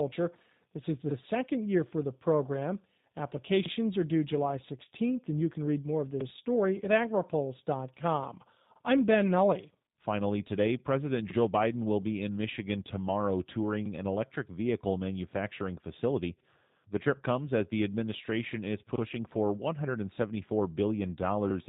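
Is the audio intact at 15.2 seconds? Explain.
No. At 15.2 seconds, as everywhere in this speech clip, the sound is rough and faintly synthetic, with nothing above 4 kHz and a clearly audible processing character. This is G.729 codec damage, present throughout and consistent with the 8 kbit/s G.729A variant. The codec rebuilds speech every 10 ms frame from a vocal tract filter, a pitch predictor and a few pulses, so fine detail is lost.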